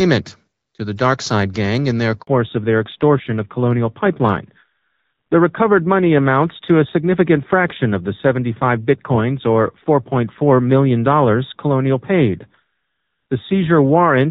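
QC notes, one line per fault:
2.21–2.27 s, handover gap: the speech cuts out for about 60 ms as the call is passed from one network link to another. While the old connection is released and the new one comes up, no speech frames reach the receiver, so the sound decays almost instantly into silence and nothing is played until the new link delivers audio. Whatever was said inside that window is gone, leaving a short hole in the speech.
2.27–14.31 s, fallback to narrowband: from the end of the gap to the close of the clip, the speech is bandlimited, with nothing above 4 kHz. Before 2.21 s the HD Voice wideband coding carries the upper range with only light coding damage. After the switch, that upper band is missing entirely, so consonants lose their crispness and the voice sounds duller, boxier and rougher. This fits a drop from wideband to a narrowband codec at a lower rate, around 7.4 kbit/s.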